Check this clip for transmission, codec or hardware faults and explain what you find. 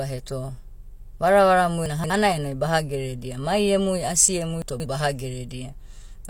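Two transmission faults, both of the same kind. Chunks out of order at 1.86 to 2.10 s and 4.62 to 4.86 s: a 60 ms chunk arrived three chunks late and plays after its successors. Nothing is lost, but each quarter-second stretch sounds jumbled.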